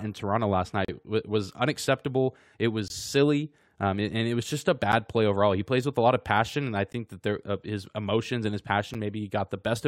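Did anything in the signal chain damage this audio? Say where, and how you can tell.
Yes, at the playback stage, where streamed segments are joined. Hard-edged holes of silence cut into the speech at 0.85–0.88 s, 2.88–2.90 s, 4.92 s, 6.93 s and 8.94 s, lasting about 36, 20, 9, 15 and 9 ms. They recur every two seconds, matching 2-second segment boundaries. This is a gap between stream segments: the timestamps leave a small space between consecutive segments, and the player fills it with silence. Nothing is lost.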